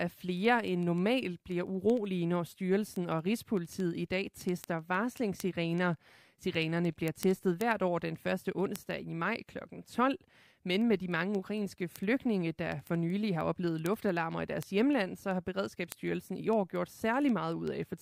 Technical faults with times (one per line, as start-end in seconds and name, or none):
0.14-17.98 word clock ticks